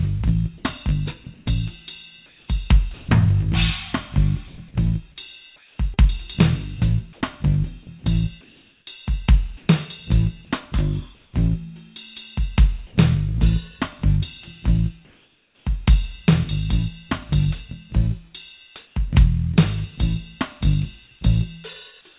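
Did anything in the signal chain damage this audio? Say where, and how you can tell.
Yes. The damage sits in call processing and the network, on a narrowband call path with nothing above 4 kHz.

Sound chopped by the voice detector runs from 0.58 to 3.08 s. The sender's detector likely switched on and off several times here. About 0.54 s of real sound became synthetic fill. The result is choppy.

Comfort noise in place of the background appears from 4.48 to 9.69 s, 11.15 to 11.33 s, 15.05 to 15.65 s, and 18.87 to 18.95 s. The real background, about 40 dB below the loud parts, turns into flat, featureless hiss. Transmission was likely paused during silence. The fill drops about 2 dB at 15.05 and 18.87 s.

Short concealed packet loss occurs at 5.94 to 5.99 s. About 40 ms of audio arrived too late or not at all. The receiver stretched the last sound across roughly 30 ms and blended back. This gives a brief smear inside the comfort-noise stretch.

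Sound dropped by the voice detector occurs at 12.87 to 12.95 s. The detector likely mistook quiet sound for background and stopped sending. About 30 ms of real sound is lost. Steady noise covers the 80 ms gap until sending resumes.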